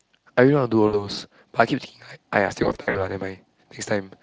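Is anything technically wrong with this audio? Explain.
Yes. VoIP packet loss concealed by the speech codec occurs at 0.87–1.10 s, where about 60 ms of audio drops out, and again at 2.63–3.09 s, where losses totalling about 180 ms are scattered across 320 ms, with gaps of up to 60 ms. With no incoming data, the decoder extrapolates from its previous pitch and filter state, so the sound smears into a fading buzzy or coloured tone and stays weak briefly after packets return. The Speex coding itself, consistent with a rate around 24 kbps, adds only slight hoarseness.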